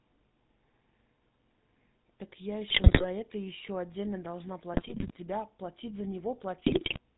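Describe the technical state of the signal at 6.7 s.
At 6.7 s, GSM bit errors are corrupting the decoder's filter, pitch and gain values between 6.66 and 6.99 s, so speech breaks into squawks, pops and gargling, consistent with a bit error rate near 3%. Underneath, the GSM full-rate codec's pulse-driven vocal tract model cuts everything above 4 kHz and leaves a plainly audible buzzy, gravelly roughness.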